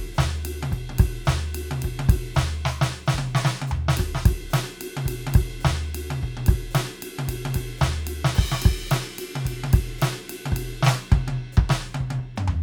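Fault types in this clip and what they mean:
Nothing in this music stood out as a fault on listening.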